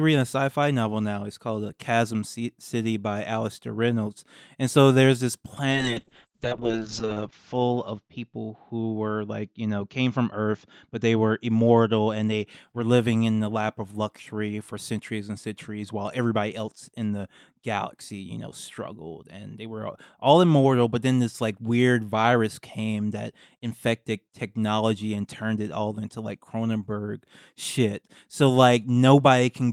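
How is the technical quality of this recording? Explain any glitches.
From 5.71 s to 12.53 s the speech turns rough and muffled, its high end cut off above about 8 kHz, worst for roughly 1.2 s. This is a call bitrate drop. The bandwidth estimate fell, so the encoder coded more coarsely, consistent with a fall from around 32 kbps to around 6 kbps, until it recovered.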